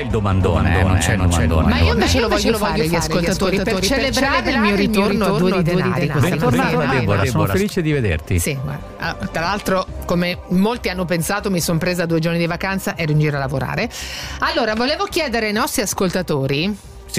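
A doubled audio track runs from 0.41 s to 7.63 s: a second full-band copy of the sound trails the first by around 300 ms at much the same level, with no decay or room colouring, and cuts in and out abruptly, likely from a slower duplicate capture path.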